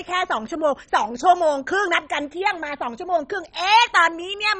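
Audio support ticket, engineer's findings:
Dull, gurgling, granular speech throughout, nothing above 10.4 kHz. Likely MP2 compression at a low bitrate, around 32 kbps: upper sub-bands switched off, remaining bands coarsely quantised and flickering.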